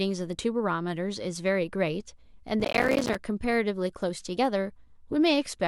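From 2.6 to 3.15 s the speech breaks into processor overload crackle. The processing could not keep up, so small audio buffers kept missing their deadlines, one after another. Each missed buffer dropped out to silence with hard edges. The gaps are tiny, which points to buffers of around 5 ms, and dozens of them fail in this half second. Together they sound like a gritty, tearing crackle over the speech that stops once the load eases.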